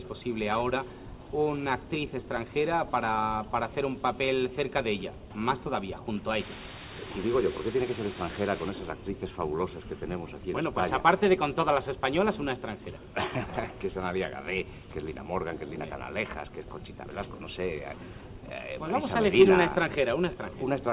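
From 6.40 to 8.69 s a steady, even hiss sits only about 10 dB below the sound, with no harsh distortion. This is low bit depth with dither: the audio was rounded to about 5 bits, and dither turned the coarse rounding error into flat white noise.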